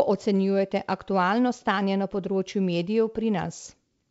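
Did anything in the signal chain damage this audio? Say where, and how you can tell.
No, nothing in the chain damaged it: the speech comes through G.722 wideband telephone coding at 64 kbit/s with its full 7 kHz band intact, and any trace the codec leaves is faint at most.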